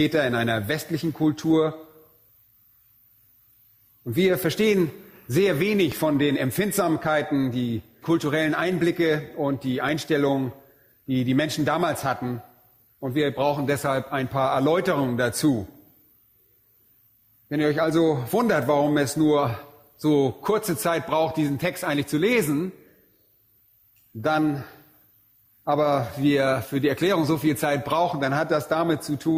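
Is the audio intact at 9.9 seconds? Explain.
No. At 9.89 s the waveform's zero line jumps to a new offset, a DC step, which then decays as a 20 Hz high-pass filter drains it away. The sudden shift is heard as a brief low thump or click while the sound continues unchanged.

The same moment also carries gain pumping, present throughout. The gain is likely set far too high and held back by a fast limiter, so the gain swings by roughly 5 dB under each loud sound, leaving the level squashed.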